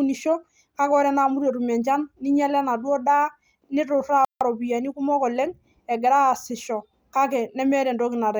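Around 4.25 to 4.41 s the speech cuts out for about 160 ms, a playback stall, likely the player starving for data before resuming.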